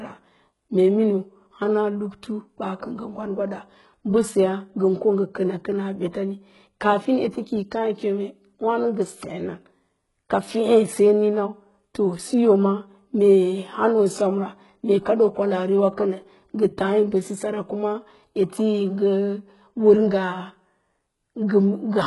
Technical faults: HE-AAC compression

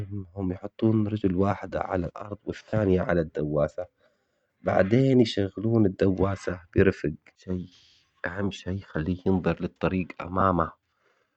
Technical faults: lost LE Audio frames

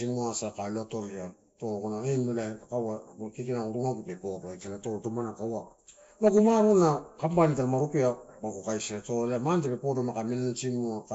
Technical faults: Nellymoser compression

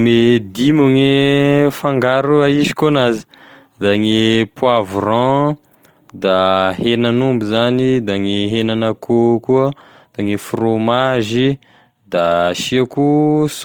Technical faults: Opus compression

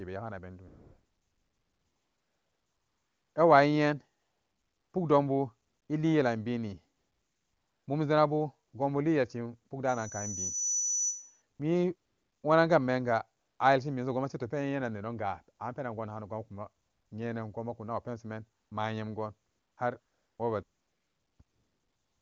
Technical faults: AMR comfort noise; loudspeaker feedback squeal

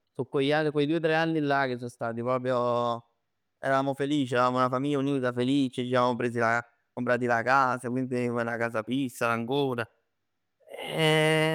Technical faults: none

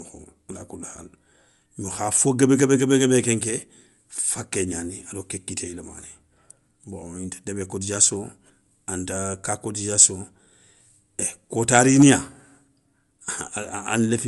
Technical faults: Bluetooth LC3 compression

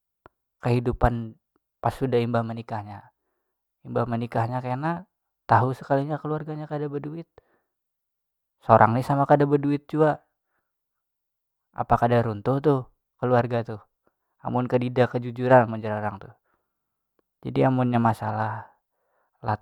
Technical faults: none

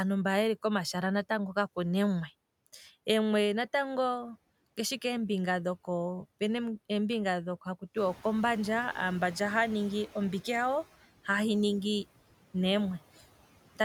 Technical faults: noise suppressor artifacts; noise suppressor catching up

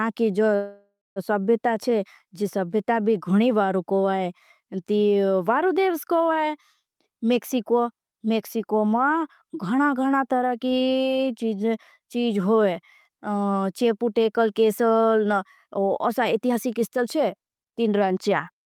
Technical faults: call audio freeze; jitter buffer speed-up

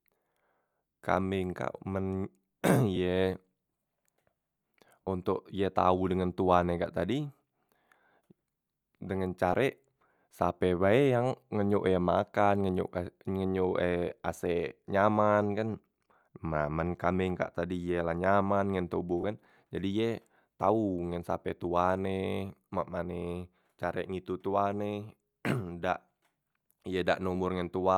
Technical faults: lost LE Audio frames

